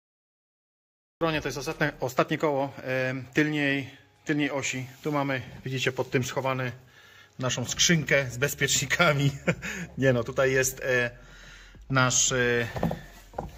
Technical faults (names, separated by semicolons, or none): cut-off start